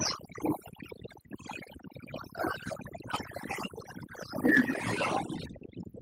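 Overdone noise removal runs through the whole recording. The noise suppressor was pushed too hard, so individual frequency bands that hover near its noise estimate get pulled far down or switched off entirely, and the softer parts of the speech are cut along with the hiss. What remains is a background of near silence dotted with twinkling artefacts.

Microphone overload follows from 4.45 to 4.61 s. The loudest stretch carries a harsh, crackling edge where the waveform peaks are flattened, overshooting the ceiling by about 5 dB, with around one sample in twenty clipped. The likely cause is an input gain set too high, driving the converter past its limit so the tops of those peaks are simply sheared off.

Microphone volume stepped down at 4.6 s, right as the distorted peak ends. Speech and background together drop by about 3 dB in a single abrupt step rather than a smooth fade. This is likely the call software reacting to the clipping it had just detected and lowering the device's input volume in one move, so the level change lands immediately after the harsh moment.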